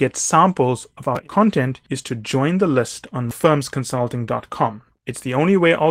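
No faults are audible anywhere in the recording.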